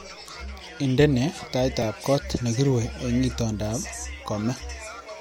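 At 1.82 s in the speech, a repeated buffer: new audio arrived late, so the same 5 ms slice played twice more with hard joins, giving a brief buzzy click. Unlike a dropout, there's no silent gap, and essentially nothing seems lost.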